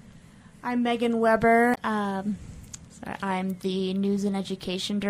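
At 1.71–1.78 s, damaged data in a compressed stream makes the decoder lose sync for about 70 ms, giving a brief glitch.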